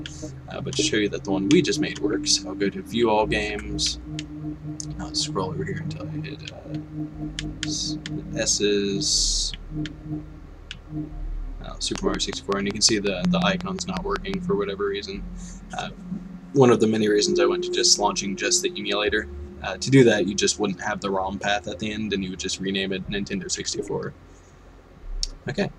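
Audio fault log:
11.96–14.35 s, train of clicks: a regular ticking of about fifteen sharp, near-identical pulses at 5.46 per second, standing roughly 20 dB above the sound and audible in pauses too. Likely cause is interference from nearby equipment or a faulty connection or power supply injecting repeated pulses.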